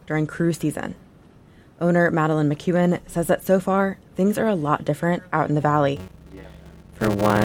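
The audio is clean until 5.96 s, then a block size mismatch (padded) runs to the end. Each block is topped up with zeros, producing a 93.8 Hz buzz and playback slowed to 0.625 speed, which fits 512-sample reads. The waveform shows regular gaps, and the spectrogram shows harmonic stripes.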